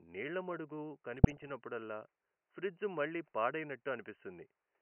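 From 1.14 to 1.50 s the speech picks up DAB burbling, short blips of noise breaking into the voice. Weak reception let bit errors slip past error correction into the audio data, at an error rate around half a percent. Faint room noise sits about 49 dB down.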